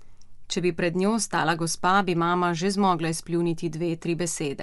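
From start to end, the speech has a grainy, breathy edge, with a hissy, noise-like top end. The cause is likely Bluetooth LC3 compression. Its 10 ms transform frames discard upper detail and fill it with noise. The damage fits about 48 kbps.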